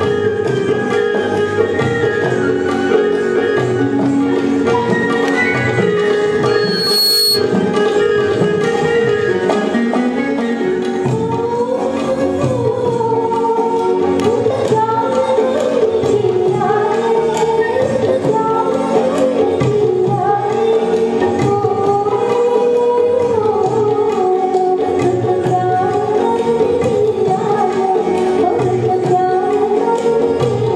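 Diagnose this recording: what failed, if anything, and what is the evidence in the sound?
Loudspeaker feedback squeal failed in the analogue stage, in the acoustic loop between microphone and loudspeaker. At 6.46 s a pure tone near 4.3 kHz appears. It swells over about half a second and holds at roughly the level of the surrounding sound. It stops at 7.51 s. The microphone was hearing its own loudspeaker. Around 4.3 kHz the loop gain rose above one, so that frequency fed on itself and grew.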